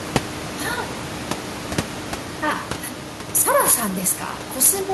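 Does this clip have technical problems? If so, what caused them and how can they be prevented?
No, there are no faults.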